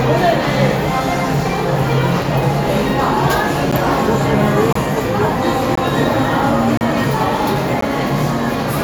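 A gap between stream segments recurs once per second, as one-second segments are joined with timestamps that leave short holes the player fills with silence. The sound cuts out with hard edges at 3.71 s (about 12 ms), 4.73–4.76 s (28 ms), 5.75–5.78 s (20 ms), 6.77–6.81 s (36 ms) and 7.81 s (about 15 ms).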